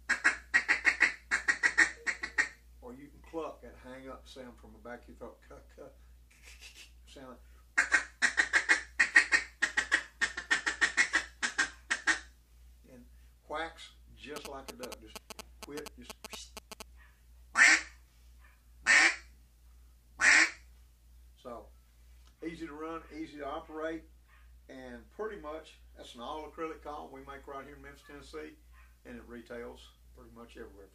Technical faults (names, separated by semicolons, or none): GSM signalling bursts